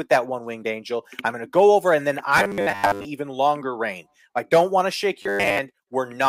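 Robotic sound from repeated short buffers hits this speech clip from 2.38 to 3.05 s and again from 5.22 to 5.59 s: a rigid, metallic 100 Hz buzz. It's likely caused by one 10 ms chunk looping while new audio arrives late, with most of the real sound skipped.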